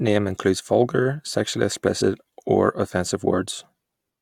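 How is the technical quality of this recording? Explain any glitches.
There's one glitch worth flagging. At about 2.00 s there's a brief glitch from damaged data in the compressed stream: corrupted bytes made the decoder misread frames and resync.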